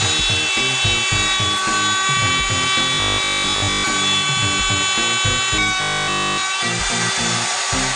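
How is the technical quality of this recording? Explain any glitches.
There are two stretches of robotic sound from repeated short buffers, from 2.94 to 3.84 s and again from 5.82 to 6.42 s. The audio turns into a rigid 50 Hz metallic buzz, likely because fresh audio arrived too late and a 20 ms chunk kept being replayed. The first stretch is mostly repeats and the second entirely.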